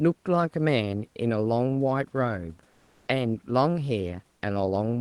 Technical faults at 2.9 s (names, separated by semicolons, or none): comfort noise in place of the background